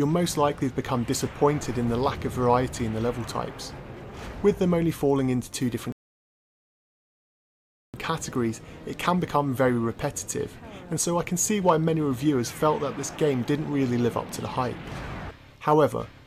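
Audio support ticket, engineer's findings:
Rebuffering stall at 5.92 s to 7.94 s. Audio drops to silence for about 2.0 s, then resumes exactly where it stopped. No content lost; time added. Probable component: streaming player buffer. Mechanism: downloaded audio ran out, playback paused until more arrived.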